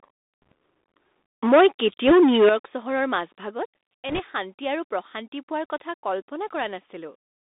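The Bluetooth CVSD headset codec narrows the speech to about 250 Hz to 3.7 kHz, with scratchy sibilants and granular hiss; a spectrogram shows nothing above 3.7 kHz. Bit errors on the Bluetooth voice link add brief rushing crackle at 0.42–0.52 s, 2.07–2.13 s and 4.09–4.22 s, heavier as the error rate climbs from roughly half a percent to two percent, seen as diffuse broadband speckle. From 1.45 to 2.53 s the loudest syllables turn harsh and crackly, with waveform peaks flattened about 9 dB over the ceiling, likely microphone overload. The level drops abruptly at 1.49 s (about 2 dB), 2.49 s (about 11 dB) and 3.51 s (about 3 dB), which points to the microphone volume being stepped down. Each drop shows as a sudden shrink in the waveform envelope.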